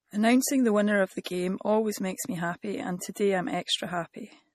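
A watery, swirling quality runs through the whole speech clip, with nothing above 14.7 kHz and sibilants turning metallic. That points to MP3 compression, likely at a low rate around 40 kbps, where the encoder cuts the treble and drops weak frequency lines frame by frame.

From 1.24 to 1.26 s, just after "the winner of the" and before "always makes me happy", a brief hiss of about 22 ms leads into a softened attack. The same pre-echo returns from 3.13 to 3.16 s after "makes me happy and", about 27 ms long. Both times, quantisation noise sized for the loud onset spreads back across the quiet instant before it within the same transform block.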